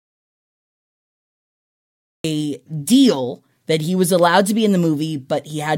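From the very start until 2.24 s, the input feeding the recorder had likely been lost, through a disconnected device, a broken link or a mute left on, while the recording carried on writing silence. The result is an audio dropout to silence already under way when the clip begins: over two seconds of dead silence with no room tone at all, before the speech cuts in abruptly mid-flow at 2.24 s.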